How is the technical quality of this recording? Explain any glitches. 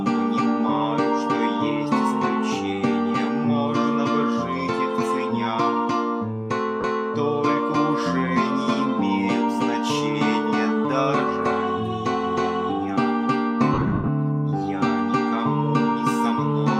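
Two dropouts from lost LE Audio frames break up the sound. Light lossy codec compression is also present. At 6.81 s a brief 30 ms patch turns smeared and noisy. From 13.74 to 14.08 s the sound repeatedly dissolves into a hissy blur, with 260 ms missing in total and the longest gap about a tenth of a second, fading briefly toward silence. The LC3 decoder is filling lost frames by reusing the last spectrum with randomised signs, then fading it.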